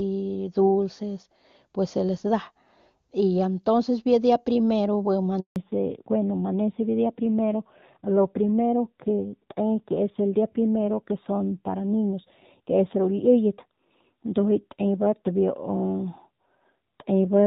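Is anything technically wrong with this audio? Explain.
Yes, there are two faults.

At 5.40 s a handover gap begins: the call switched networks and no speech frames arrived for 160 ms, until 5.56 s. The sound fades within a few tens of milliseconds and then cuts to silence. On a waveform this is a flat line; on a spectrogram, an empty vertical band.

From 5.56 s to the end there is a fallback to narrowband. After the handover the call left HD Voice for an older narrowband codec, so nothing above 4 kHz survives. The spectrogram shows a hard ceiling at 4 kHz, and the sound turns duller and rougher, which points to a low-rate narrowband mode. Before the switch, the wideband HD Voice coding sounds clean, which fits a high AMR-WB rate.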